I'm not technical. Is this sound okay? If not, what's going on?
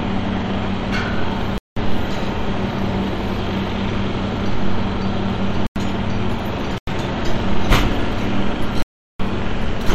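No. Four times, the program producing this audio fell behind and handed over empty blocks of digital silence in place of real sound. That makes the sound switch off and back on abruptly, heard as short holes at 1.58 to 1.77 s, 5.67 to 5.76 s, 6.78 to 6.87 s, and the longest, 8.82 to 9.20 s. The gap lengths suggest the sound was handled in fixed chunks that sometimes arrived too late.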